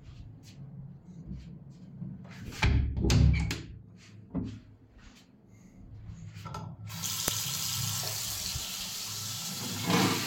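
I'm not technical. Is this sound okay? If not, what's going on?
No. At 7.28 s there's a sharp click: a file header played as audio, where leftover file data between two joined pieces was played as sound.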